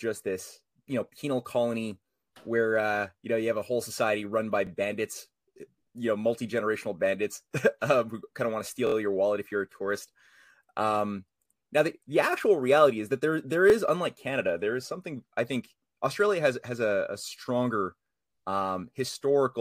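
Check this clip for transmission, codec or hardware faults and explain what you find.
Three repeated-buffer glitches turn up in this speech clip. At 4.67–4.69 s, after "whole society run by", and at 13.70–13.72 s, after "is that there there", a 23 ms chunk plays twice. At 8.87–8.94 s, between "kind of want to" and "your wallet if you're", it plays four times. Fresh audio arrived late, so the device replayed its last block, which fits a 1024-sample buffer. Each repeat sounds like a hard-edged stutter or brief buzz, with essentially no audio lost.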